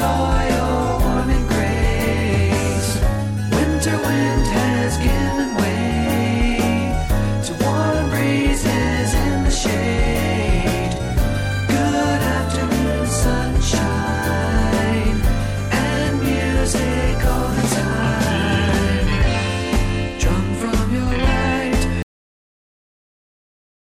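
The audio stops abruptly at 22.02 s, in the middle of a sound, and drops straight to digital silence with no natural decay, staying silent until the clip ends. This is a cut-off end: the final buffers were never written out, so playback simply ends there.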